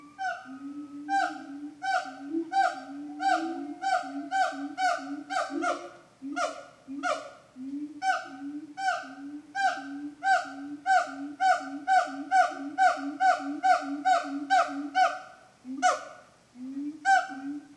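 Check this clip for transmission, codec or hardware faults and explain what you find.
Checking the clip turns up no faults to explain.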